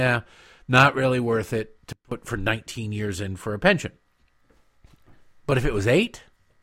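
It's a speech clip with a sudden gain jump right after "not really worth it": at 1.93 s everything, background noise included, drops by about 24 dB, then snaps back at 2.12 s. That's likely a digital gain change applied abruptly with no ramp.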